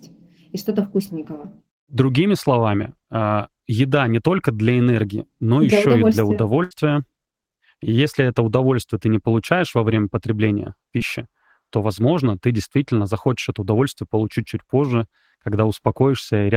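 Right after "для еще и для", at 6.63 to 6.73 s, there's a burst of packet loss: about 80 ms of audio never arrived, so the receiver stretched the last sound and faded it out for roughly 70 ms before jumping ahead. That's the held, dying sound you hear. Then at 10.99 to 11.02 s, following "получаешь во время потребления", there's a short concealed packet loss: about 20 ms went missing and was patched by continuing the preceding sound for around 15 ms, leaving a quick smear before the real speech blends back in.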